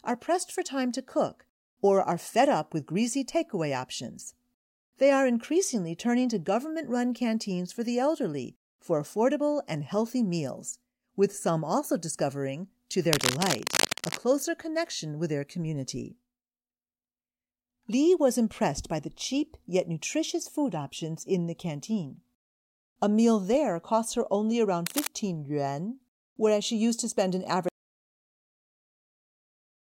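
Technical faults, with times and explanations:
13.09–14.18 s and 24.86–25.11 s: cable scratch noise. Rough, uneven bursts of crackle over the speech, first at about the speech's level, then about 5 dB below it, likely from a worn connector being moved.
27.68 s to the end: audio dropout to silence. The speech cuts off mid-flow into silence with no room tone, likely because the input was lost while recording continued.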